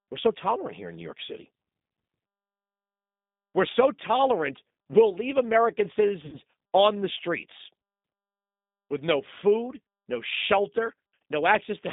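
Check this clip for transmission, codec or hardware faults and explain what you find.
Two faults are present: a low-rate speech codec across the whole clip, and one concealed packet loss.

G.729 codec damage runs throughout. The speech is confined to roughly 150 Hz to 3.7 kHz and sounds rough and slightly synthetic. That texture fits an 8 kbit/s G.729 coder, which rebuilds each 10 ms frame from a vocal-tract filter, a pitch predictor and a few pulses. Simple band-limiting would leave the voice clean, not buzzy.

VoIP packet loss, concealed by the speech codec, occurs from 6.26 to 6.37 s, just before "on the streets". About 60 ms of audio is missing, which fits three lost packets. The decoder stretches its last pitch and filter into a fading buzzy tone or coloured noise. The voice stays weak until the frames rebuild. A plain dropout would give silence or a click instead.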